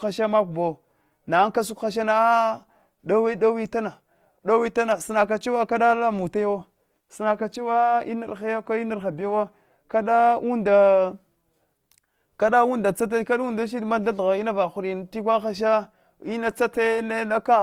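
Speech carrying plainly audible Opus compression from start to finish, likely from a low-rate Opus encode. The damage is grainy, rough texture rather than the swirling, watery holes of MP3, because each band's energy is kept and starved bands are filled with noise or folded copies of lower ones. The spectrum still extends to about 20.2 kHz, and the sound fits the music mode at roughly 24 kbps, not the muffled, narrowed speech mode.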